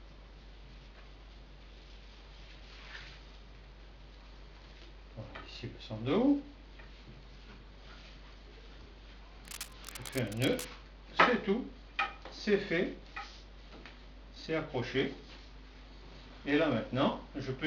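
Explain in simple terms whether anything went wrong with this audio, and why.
Something did go wrong. From about 9.45 to 10.68 seconds, a rough scratching, rustling noise sits over the sound, fairly loud. This is cable scratch noise. A worn cable or plug was likely moved, so its electrical contact flickered and crackled.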